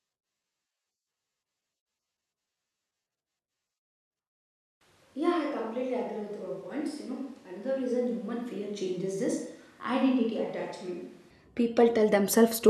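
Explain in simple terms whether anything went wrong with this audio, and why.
From 4.81 s to 11.30 s the speech suddenly turns hollow and roomy, thinner in the low end, a little quieter and with more background noise, then snaps back. That points to a switch to a distant microphone, likely because the close microphone dropped out.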